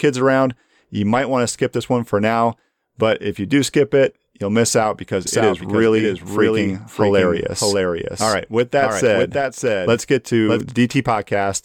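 A speech recording with a doubled audio track running from 5.27 s to 10.61 s, starting just after "you'll miss out because". Throughout that span a second full-band copy of the speech trails the original by roughly 0.7 s, a few decibels quieter, with no decay or room colouring, and it cuts in and out abruptly at both ends. This is likely the same signal being captured twice, once through a slower path, or an edit leaving two offset copies mixed together.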